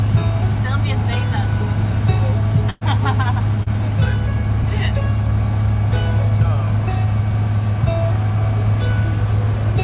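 Call audio through a narrowband phone-style codec, with nothing above 4 kHz, which fits G.711 mu-law. At 2.70 to 2.83 s there's a burst of packet loss. The receiver stretched and faded the last sound for about 110 ms, went silent for about 10 ms, then picked up 120 ms further on. A short concealed packet loss follows at 3.63 to 3.68 s. About 32 ms was patched by continuing the previous sound before blending back, with 40 ms of the real audio lost.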